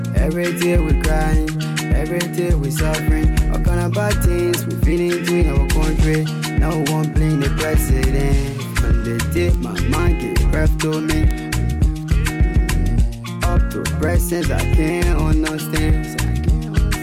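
Three sharp, isolated ticks cut through the audio at 2.64 s, 9.54 s and 11.31 s. They're classic bit error spikes. The one at 2.64 s is fairly quiet, peaking around -26 dBFS. The later two jump to about -8 dBFS. Each sounds like a single-sample flip, with the last maybe spanning two samples. A flipped bit throws the value off by a power of two for an instant, then it snaps back, giving a broadband click unrelated to the underlying sound.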